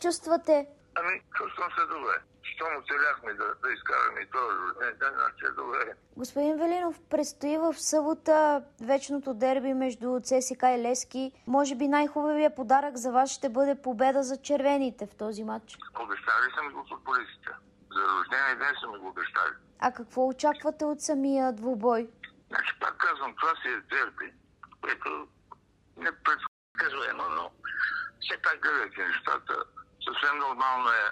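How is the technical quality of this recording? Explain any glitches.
The recording has two linked playback glitches late in the clip: a brief dropout followed by a spell of sped-up sound.

Playback stall, 26.47 to 26.75 s: the sound cuts to silence in mid-flow for about 0.28 s, then resumes. A gap like this is likely the player running dry of buffered data or having its output thread blocked, so nothing reaches the output until it recovers.

Catch-up at higher speed, 26.75 to 28.61 s: right after the gap, the audio runs 1.15 times faster and sits roughly two semitones sharp, so it sounds hurried and slightly higher. The player is resampling its backlog to recover the time lost in the stall. Speed and pitch rise together because both come from the same resampling. Once the lost time is made up, around 28.61 s, both drop back to normal.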